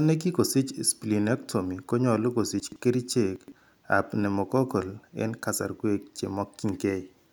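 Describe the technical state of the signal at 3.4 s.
Right around 3.4 s you've got chunks out of order, spanning roughly 3.36 to 3.52 s. The speech there is cut into 40 ms pieces, and one of them turns up three chunks late, so it plays after the three that should have come after it. Nothing actually goes missing, but the sequence gets shuffled and you get three hard joins. It comes across as a short jumbled, garbled blip.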